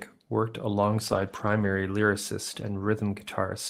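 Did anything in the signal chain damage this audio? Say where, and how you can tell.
Yes. There is a lost packet rebuilt from error correction at the network stage, from 1.07 to 1.69 s and again from 2.61 to 2.79 s. The speech never drops out, but both stretches turn rougher and noisier, about 320 ms and then 100 ms of degraded sound. That fits a scatter of separate lost packets, each stood in for by the low-bitrate redundant copy that Opus carries in the following packet. The decoder plays that coarser copy instead of leaving a gap.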